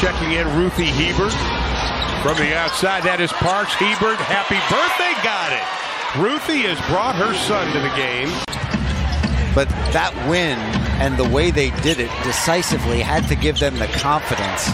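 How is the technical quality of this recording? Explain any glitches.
Two clear glitches affect the recording, both drift correction steps. From 1.42 to 2.69 s the sound slows by 6.23% and drops 111 cents. From 12.15 to 13.28 s it speeds up by 6.23% and rises 105 cents. Each step is likely clock-matching software changing playback rate abruptly to rebalance a buffer. Unlike wow, each shift is steady and snaps back.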